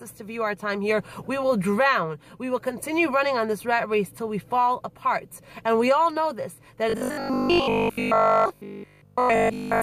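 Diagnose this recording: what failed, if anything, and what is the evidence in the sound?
From 6.90 s to 9.82 s the sound turns into a rigid, metallic buzz fixed at 50 Hz: robotic sound from repeated short buffers. This is likely a driver or buffer stage underrunning and replaying a 20 ms block, so roughly 70% of the audio is repetition.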